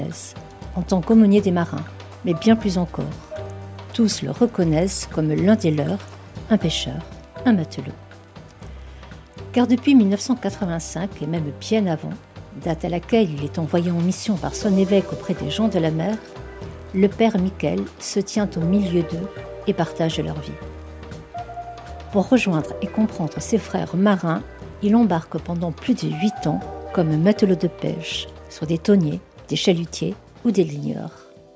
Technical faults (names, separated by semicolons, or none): none